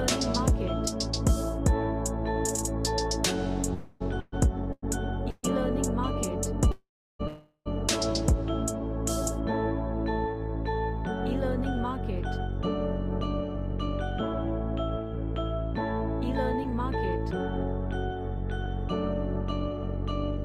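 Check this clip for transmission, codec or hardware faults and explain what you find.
Four kinds of transmission fault are audible, all from network delivery of a call stream. None comes from the codec or hardware.

Call audio freeze occurs three times: 3.73 to 4.02 s, 6.71 to 7.21 s and 7.27 to 7.68 s. The sound stalls, and the last fragment is stretched into a fading tail. In the second event the tail drops to silence for about 0.32 s, and in the third for about 0.05 s. Playback then resumes where it left off, so nothing is lost but roughly 0.27, 0.48 and 0.38 s of delay is added. The likely cause is late packets emptying the jitter buffer.

Repeated stalls (stutter) run from 4.20 to 5.45 s. The buffer empties three more times as packets keep arriving late, and each gap is bridged by extending the last sound. The longest gap is 128 ms, and about 28 percent of that stretch is filler. The audio drags and stutters without losing content.

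Jitter buffer speed-up runs from 12.60 to 18.66 s. The buffer holds excess audio, and the receiver trims it by cutting pitch-period-sized slices, around 50 ms in total. Playback runs at 101 percent speed with pitch unchanged, which is below the point where it sounds hurried.

Short concealed packet loss occurs at 16.64 to 16.66 s. About 20 ms never reached the decoder in time, and the receiver extrapolated the preceding sound across the hole before blending back. The result is a brief smear or wobble, with a slight reduction in delay.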